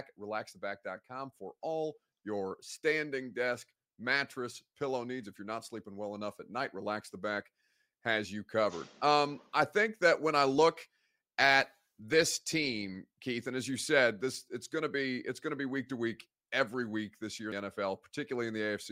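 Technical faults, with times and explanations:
17.52 s, damaged data in a compressed stream: just after "every week this year", a short blip cuts into the speech, lasting only a few milliseconds. Part of the encoded data at this point is corrupted, so the decoder misreads the affected frame, loses its place in the stream and scans ahead for the next valid frame header. The garbled output during that search produces the brief blip.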